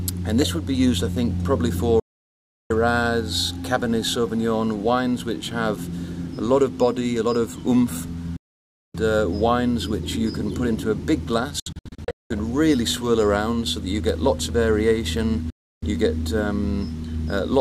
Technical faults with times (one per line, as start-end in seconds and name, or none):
2.00-2.71 digital broadcast dropout
8.36-8.95 digital broadcast dropout
11.60-12.31 digital broadcast dropout
15.50-15.83 digital broadcast dropout